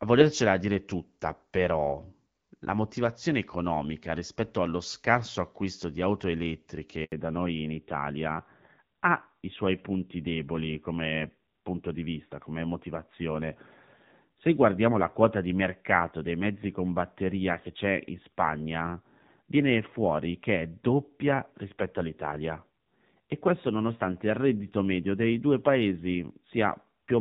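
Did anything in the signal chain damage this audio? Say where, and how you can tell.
Yes. A handover gap at 7.04 to 7.12 s is a network-stage fault: the speech drops out within a few tens of milliseconds and stays silent for 80 ms. No speech frames arrived while the call switched links, so the speech during that gap is lost.

A fallback to narrowband follows from 7.12 s to the end, also at the network and codec stage. The light coding of the HD Voice (AMR-WB) stretch gives way to a duller, rougher sound with nothing above 4 kHz, which fits a renegotiation down to a 7.4 kbit/s AMR-NB rate.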